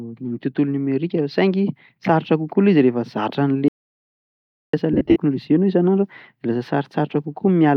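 From 3.68 s to 4.73 s the speech cuts out completely for about 1.05 s. This audio dropout to silence leaves silence with no room tone, likely from the input being lost while recording continued. Whatever was said in that second is gone.

From 4.93 s to 5.16 s come lost LE Audio frames: about 150 ms of gaps scattered across roughly 225 ms, the longest run around 50 ms, which fits 7.5 ms LC3 frames. The decoder refills each gap with a sign-randomised copy of the last spectrum, so voiced sound smears into brief noisy bursts.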